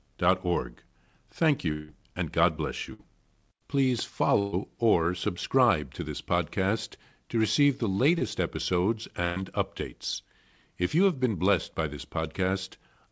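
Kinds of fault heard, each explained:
Long network dropout: around 1.72 s the sound carries on as a fading buzz or hiss for about 165 ms, then jumps ahead, likely a stall in incoming audio.
Burst of packet loss: at 2.93, 4.39 and 9.24 s, 60 to 140 ms vanish, patched with a held buzz or fading hiss; the 4.39 s one sits just before "or subscribe to this".
Short concealed packet loss: at 8.18 s, right after "podcast to receive the", about 20 ms goes missing and gets smoothed over as a quick smear.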